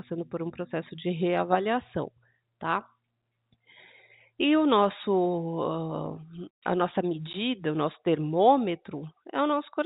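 At 7.33 s, between "a nossa" and "o nosso", the speech drops out for about 10 ms. That is packet loss filled with silence: a single lost packet, by the sound of it a 10 ms one, was replaced with silence rather than concealed. The gap is brief, with abrupt edges. The G.711 telephone path carrying the call limits the audio to below 4 kHz.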